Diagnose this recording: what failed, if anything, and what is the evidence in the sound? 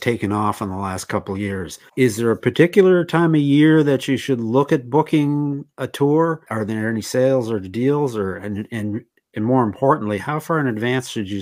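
Nothing failed; no fault is audible anywhere in the recording.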